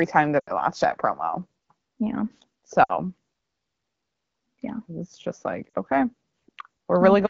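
Speech coded as AMR-WB HD Voice, clear with light codec colouring consistent with about 12.65 kbit/s, has lost AMR speech frames at 0.40 to 0.52 s (between "time that" and "watched that promo yeah"), 2.84 to 2.92 s, and 5.70 to 5.74 s after "yeah it's just like". Each gap of roughly 40 to 80 ms fades to near silence within two frames, because the decoder stretches its last good pitch and vocal tract settings at falling gain.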